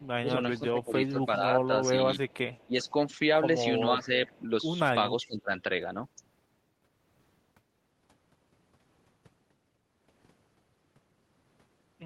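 Echo leak, likely from a far-end echo canceller letting loudspeaker pickup through, returns a faint copy of the speech 384 ms late from 0.0 to 1.31 s, about 25 dB below it. Over 0.21 to 2.95 s, speech suppressed in double talk likely comes from the canceller ducking the talker while both sides speak. The speech drops by up to about 15 dB in pieces totalling under a second. The echo leak recurs from 1.85 to 2.89 s, fainter at about 35 dB down and likely from the same canceller. Double-talk suppression, likely the canceller again, briefly dips the speech about 5 dB between 3.82 and 4.10 s. The delayed echo, likely leaking once more, returns from 4.02 to 4.43 s at about 30 dB down. From 5.11 to 5.51 s, likely double-talk suppression cuts the speech deeply, about 20 dB, for roughly a third of a second.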